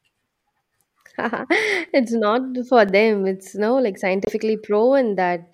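From 0.89 s to 2.89 s there are periodic USB or driver dropouts. About three tiny gaps fall once every second. Each loses roughly a millisecond of speech, filled with silence. Something blocked the audio path at a fixed interval. They sound like regular ticks.

At 4.25 s to 4.33 s the speech cuts out for 23 ms, then resumes. This is likely a Bluetooth stall. Delayed packets drained the headphones' buffer, so playback paused until the data arrived. It sounds like a brief hiccup.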